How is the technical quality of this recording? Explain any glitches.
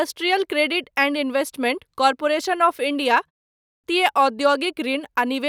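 The recording has one clear glitch, a clipped start after a pause at 3.54 to 3.84 s. Following a short silence of about 0.32 s, the output device appears to have gone idle and needed time to wake and resynchronise before passing audio again. Roughly 0.3 s of speech is swallowed, so the speech resumes abruptly out of silence with its opening sounds missing rather than building up naturally from the pause.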